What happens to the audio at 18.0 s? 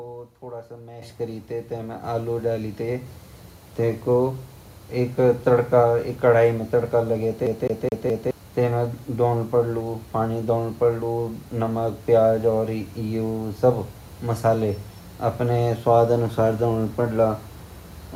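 At 18.0 s the speech continues intact, with no dropout, click, distortion or other fault.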